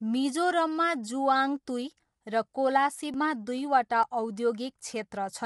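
This speech clip has low-delay AAC compression throughout: rough, grainy texture, noise between harmonics and nothing above about 11.6 kHz, likely from AAC-ELD at around 32 kbps. A dropped buffer (overrun) likely causes a skip forward at 3.14 s and 4.03 s, each losing roughly 10 ms of audio.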